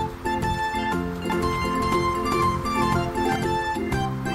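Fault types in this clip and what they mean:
Doubled audio track: a second, full-band copy of the sound runs alongside the original from 1.30 s to 3.36 s, trailing it by around 0.4 s and at roughly the same level. The copy has no decay or added room colour, so it reads as a distinct repeat rather than an echo, and it cuts in and out abruptly at those points. The likely cause is a second capture of the same signal arriving through a slower path.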